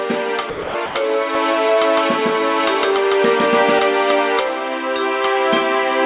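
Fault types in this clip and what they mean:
Sound dropped by the voice detector: the sender's voice detector likely judged the sound as background and stopped sending, so steady comfort noise replaces it at 0.50 to 0.74 s and 0.86 to 0.95 s.
Doubled audio track: a second copy was likely mixed in by a slower capture path, so from 1.35 to 3.79 s an equally loud, dry copy trails about 150 ms behind.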